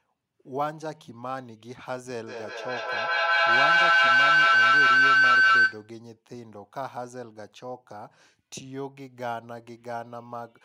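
A feedback howl runs from 2.27 to 5.94 s: a microphone picks up a nearby loudspeaker on the same call, so each pass round the loop comes back louder. It swells into a tone near 1.5 kHz, pulsing roughly every fifth of a second, peaking about 15 dB above the speech.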